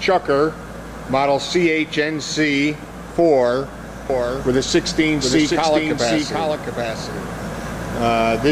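From 4.10 s to the end, a doubled audio track appears. A second full-band copy trails the original by roughly 0.7 seconds, about 5 dB quieter. It cuts in abruptly, with no decay or room colour. A slower second capture path is the likely cause.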